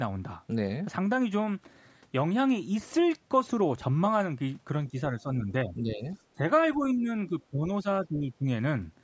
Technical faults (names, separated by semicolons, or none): speech suppressed in double talk